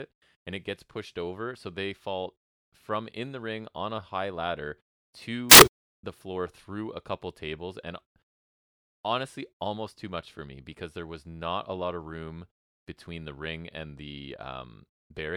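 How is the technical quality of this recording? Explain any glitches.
The recording has one clear glitch in the speech. From 5.51 to 5.86 s, just before "the floor through a", samples built from the wrong bytes turn fast-changing low bits into dominant values, producing a burst of loud, harsh broadband noise.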